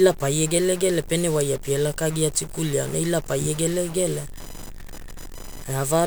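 A broken data line or converter bit has likely left one bit of this speech recording stuck, a stuck bit that holds its value throughout. About half the samples land off by that bit's weight, giving a distortion that follows the shape of the waveform. Because the bit also flips with the sign of small values, the pauses fill with noise instead of falling silent. From 3.13 s to the end, the computer's changing processor or graphics load starts disturbing the ground shared with the audio circuit, adding computer activity noise. It arrives as a chirping buzz pulsing at roughly 1 kHz, sitting about 30 dB below the speech. It keeps its own rhythm, independent of the speech, because it follows the machine's workload and not the recorded sound.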